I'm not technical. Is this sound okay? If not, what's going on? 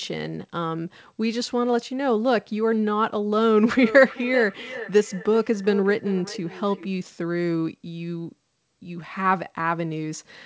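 No. From 3.83 to 6.93 seconds there's a feedback echo between two devices. The speech comes back roughly every 0.4 seconds, quieter and more hollow each time. Two devices in the same room are on the call, and one microphone is picking up the other's speaker.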